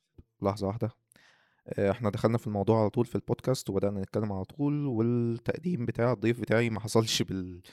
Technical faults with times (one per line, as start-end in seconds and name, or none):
none